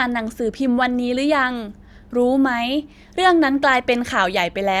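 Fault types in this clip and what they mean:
No faults detected in this recording.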